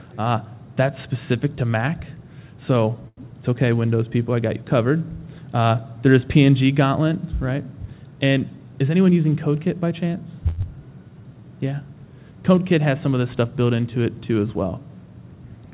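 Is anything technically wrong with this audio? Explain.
Yes. The clip has several jitter-buffer faults, all heard through a call path whose band stops at 4 kHz, which fits a narrowband G.711 A-law link.

Short stall from a late packet, at 3.08 to 3.20 s and again at 10.48 to 10.60 s. Each time a packet missed its playout deadline and the jitter buffer ran dry, so the receiver extended the last sound, by 91 ms and then 97 ms, until the packet arrived. Nothing is lost, but the sound hangs unnaturally long, with a faint buzz or dip, and playback resumes exactly where it paused.

Jitter buffer speed-up, from 8.51 to 9.11 s. The buffer had accumulated more audio than its target, so the receiver trimmed short pitch-period pieces repeatedly, about a tenth of a second in total. Playback runs at 114% of normal speed while the pitch stays unchanged, so this stretch sounds rushed before settling back to normal pace.

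Skip ahead, at 10.61 to 10.66 s, immediately after the second stall. A stretch of around 70 ms was discarded while later audio was already queued, and the two sides were joined with only a tiny fill. The result is an abrupt forward jump, with part of a sound missing and an almost seamless splice.

Jitter buffer slow-down, from 11.09 to 11.46 s. With the buffer running low, the receiver repeated single pitch periods to rebuild its reserve, adding 64 ms. Playback drops to 85% speed at the same pitch, so sounds in this stretch are drawn out.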